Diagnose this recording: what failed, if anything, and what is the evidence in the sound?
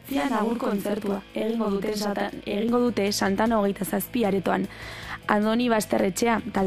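Channel delay (doubling) from 0.0 to 2.69 s. Every onset in that span is followed about 40 ms later by a second copy at the same level, giving a doubled, slapped quality that stops abruptly at 2.69 s. The stage is the driver or buffer: one channel was held back by a long block before the two were summed to mono, so the late copy stands apart as an echo rather than blending in.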